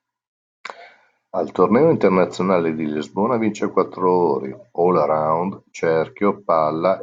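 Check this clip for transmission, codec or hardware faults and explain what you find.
Nothing stood out on listening to this speech.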